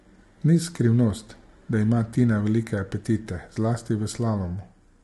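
Throughout the speech, low-delay AAC compression is the likely cause: very short coding frames at a bitrate that sounds near 32 kbps leave too few bits to code the spectrum finely, so the voice turns plainly rough and grainy, with noise between harmonics and nothing above 11.6 kHz.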